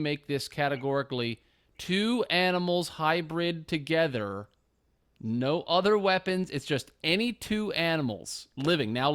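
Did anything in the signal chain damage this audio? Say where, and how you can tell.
Yes, at the converter stage. From 7.05 to 9.02 s the speech picks up a gritty hiss that swells on loud, bright sounds and disappears in the pauses. That is sample clock jitter: an unsteady converter clock, wobbling by something like a microsecond and a half, samples at slightly wrong instants. Steep waveform slopes therefore turn into error, here roughly 35 dB below the signal. A spectrogram shows a broadband haze that brightens with high-frequency energy and clears in the gaps.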